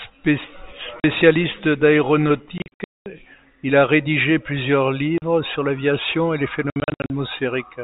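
Sharp-edged holes cut into the speech at 1.0 s and 5.18 s (about 40 ms each), then in scattered clusters from 2.58 to 3.06 s and 6.7 to 7.1 s. This is packet loss filled with silence. The gaps fit 20 ms packets.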